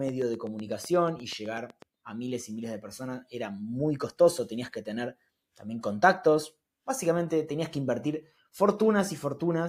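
Likely interference or a struggling interface injects pulses from 0.09 to 1.83 s, a train of clicks: roughly fifteen evenly spaced ticks, eight per second.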